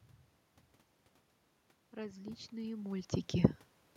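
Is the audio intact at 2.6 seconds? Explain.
No. At 2.6 seconds the clip is inside an automatic gain rising episode from 1.95 to 3.11 s. The input level had fallen by about 13 dB, so the gain control lifted its gain gradually, by about 5 dB over roughly a second. The voice and the room noise swell together, and that shared swell shows the gain stage at work rather than a talker simply moving closer.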